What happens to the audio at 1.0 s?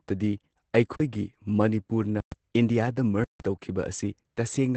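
The speech stops dead from 0.96 to 1.0 s, a flat 40 ms silence, and then it resumes. This is an underrun with held sample: the output buffer emptied and the converter held its last value. Roughly 40 ms of live audio was lost, so the restart jumps.

Across this moment the speech also sounds muffled and slightly hoarse and robotic, with nothing above about 8.6 kHz. That is Opus voice compression at 12 kbps in SILK mode, which limits the band and codes the excitation coarsely.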